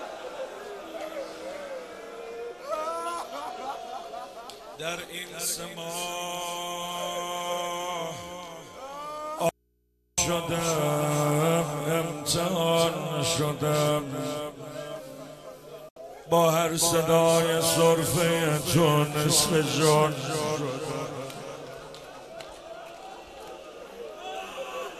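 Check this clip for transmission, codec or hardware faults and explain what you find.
Two faults are audible.

From 9.49 to 10.18 s, an audio dropout to a faint residue leaves about 0.69 s of hum roughly 45 dB below the signal. A likely break upstream leaves the open input live.

At 15.89 s, a digital broadcast dropout mutes 72 ms with a 3 ms fade. That fits about three frames lost and muted by the receiver.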